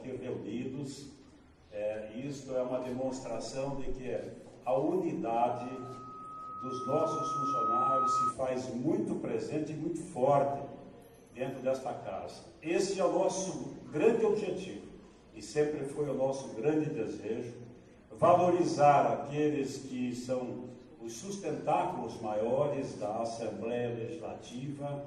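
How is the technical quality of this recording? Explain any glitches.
The recording has one clear glitch: a loudspeaker feedback squeal from about 5.38 to 8.37 s. The mic is catching its own speaker, and at 1.3 kHz the loop gain tips past one, so that tone feeds itself, swelling over roughly two seconds until it sits about 5 dB above the sound.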